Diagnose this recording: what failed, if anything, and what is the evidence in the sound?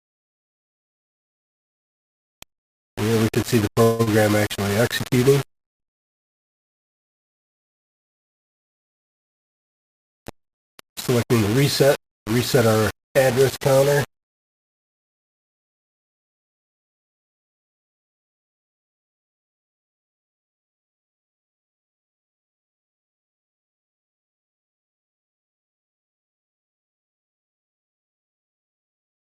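Low bit depth without dither, likely from sample-format conversion: grainy, signal-following distortion throughout, roughly 20 dB below the signal, fitting 4-bit rounding; waveform shows visible stair-steps.

Call audio freeze at the network/jitter buffer: 3.83–4.01 s a fading buzz fills 158 ms, and 5.57–5.82 s goes silent for 230 ms. Both are likely late packets. Audio resumes without loss, seen as a smeared band or a blank gap.

Short stall from a late packet at 4.03–4.09 s: the buffer ran dry and the last sound was held for 35 ms, showing as a flat horizontal streak before the audio resumes intact.

Jitter buffer speed-up from 11.14 to 12.99 s: playback runs at 109% with unchanged pitch as pitch periods are dropped, about 200 ms in total, compressing the waveform in time.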